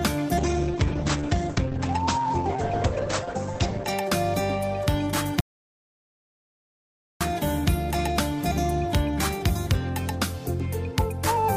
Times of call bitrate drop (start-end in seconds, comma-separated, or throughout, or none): 0.39-3.93